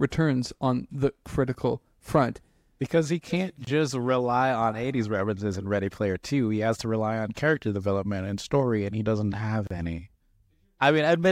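Gaps at a join of encoded pieces break this speech clip at 3.65 to 3.67 s (about 24 ms) and 9.67 to 9.71 s (about 34 ms), six seconds apart. Separately encoded segments were spliced untrimmed, so encoder start delay and end padding leave brief silences before the sound resumes.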